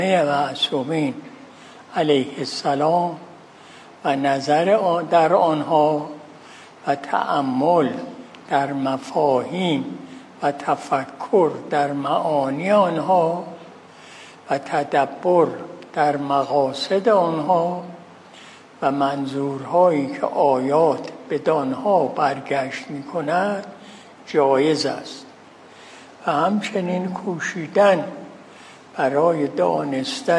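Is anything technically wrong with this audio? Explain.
No, nothing technically wrong can be heard here.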